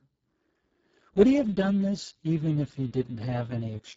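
From start to finish, the speech carries heavy Speex codec damage. Too few bits reach the excitation signal, so it sounds hoarse and noisy. This fits a rate near 6 kbps. Above 4 kHz is only a noise-like fill, ending near 7.7 kHz.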